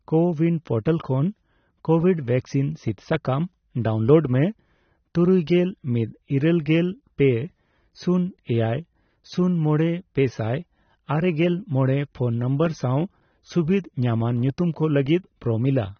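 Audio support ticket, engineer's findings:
Dull, band-limited speech throughout; no content above about 6.3 kHz. Likely AAC compression at low bitrate, which fits roughly 24 kbps AAC-LC. Encoder lowers cut-off and starves bands of bits, so sibilants turn fizzy and sustained sounds warble.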